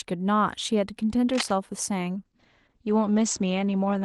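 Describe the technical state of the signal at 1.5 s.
Cable scratch noise runs from 1.33 to 1.51 s, so at 1.5 s the signal is still in its final moments. Dense, irregular bursts of crackle and rustle sit over the speech at a strong level, only slightly below the speech itself. The likely cause is a worn cable, connector or control being moved, so that its contact resistance jumps about rapidly and injects that uneven noise into the line.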